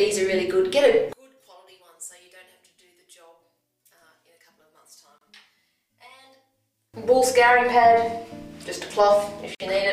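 From 1.13 s to 6.94 s, the sound drops by about 28 dB and turns faint. This points to one channel inverted. With one side's polarity likely reversed, the shared centre content cancels when the channels combine, leaving only their faint difference.

At 5.18 s, a 29 ms silence cuts into the flow, and at 9.55 s a 51 ms one. These are gaps at a join of encoded pieces. Each piece kept its encoder's start delay and end padding. The sound stops briefly, then resumes where it left off.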